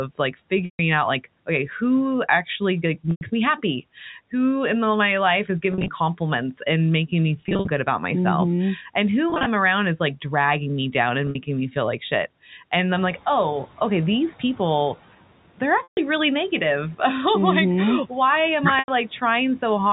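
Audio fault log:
0.65, 3.11, 5.72, 7.41, 9.3, 11.27, 15.83 and 18.79 s, packet loss with pitch repetition: 60 to 160 ms dropouts where the last pitch period gets looped, giving brief buzzy held tones, e.g. between "compliments and making me" and "good about myself".
12.95 to 13.18 s, noise suppressor catching up: room noise jumps about 14 dB, and for roughly 230 ms it leaks through before the suppressor's estimate adapts and pulls it down by about 8 dB.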